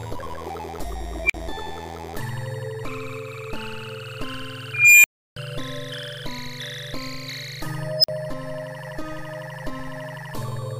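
At 1.24 s, an unstable filter squeals near 2 kHz. It swells over 58 ms, then overflows and drops to 46 ms of silence. At 4.74 s, a slower one builds for 302 ms near 2 kHz and leaves 325 ms of silence. At 7.98 s, a shriller burst near 5 kHz rises in 56 ms, with 46 ms of silence. In each case a feedback filter's output grows without bound until it resets.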